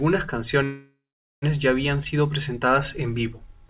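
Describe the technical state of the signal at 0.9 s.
At 0.9 s the signal is inside a call audio freeze running from 0.64 to 1.44 s. The likely cause is packets stalling in transit until the jitter buffer emptied, so the receiver extended the last sound into a fading fill that drops to about 440 ms of silence. When delivery resumes, the speech continues where it stopped, now 780 ms late, with nothing lost, heard through the narrowband call path with no content above 4 kHz.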